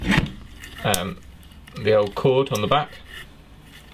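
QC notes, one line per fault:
No faults found in this clip. Nothing to log.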